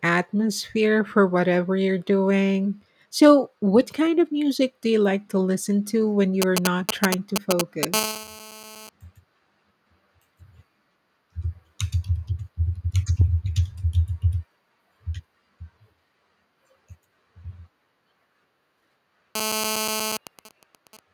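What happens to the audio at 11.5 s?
Nothing goes wrong at 11.5 s; the speech runs on intact through that moment, with no dropout, click, distortion or other fault to be heard.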